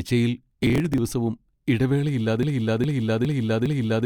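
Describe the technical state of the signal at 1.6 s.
At 1.6 s the speech signal is intact, with no dropout, clipping, glitch or other technical fault at that point.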